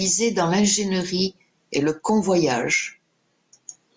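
A speech recording with no technical fault to report. Nothing that goes wrong can be heard at any point in the clip.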